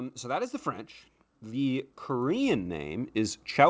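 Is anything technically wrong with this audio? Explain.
Yes. From 1.46 s to the end of the speech, automatic gain rising: the gain control judged the input too quiet and kept raising its gain, so the voice and the background noise swell together steadily rather than staying at a constant level. The audio carries nothing above 8 kHz, consistent with a G.722 call path.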